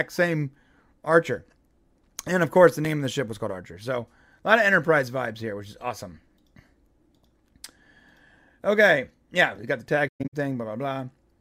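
At 2.85 s there is a block of digital silence. For about 2 ms the sound cuts out with hard edges, giving a brief tick.

From 10.07 to 10.34 s comes AAC frame loss with muting. The decoder zeroes lost frames, so sound fades out and back in. The longest dropout lasts roughly 150 ms.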